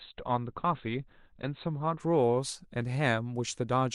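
From 0 to 2.0 s, an adaptive stream starting at a low bitrate dulls the speech. Nothing sounds above 4.3 kHz, which points to roughly 12 kbit/s Opus. Then quality jumps abruptly.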